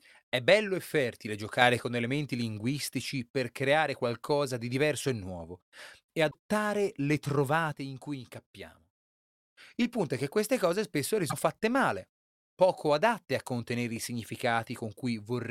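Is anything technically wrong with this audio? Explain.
Yes, there are two kinds of fault in this speech.

Sudden gain jumps: right after "bello e fertile", from 1.62 to 1.80 s, the level leaps up by about 6 dB. Then from 7.72 to 9.36 s it drops by about 8 dB. In both cases the voice and the background noise shift together, with no fade. That's likely a gain change applied instantly rather than ramped.

Damaged data in a compressed stream: at 6.30 to 6.35 s, after "diverso e nuovo e", and at 11.29 to 11.33 s, after "che queste cose spesso", there are brief glitches. The decoder hit corrupted frames, lost sync and skipped ahead to the next good one.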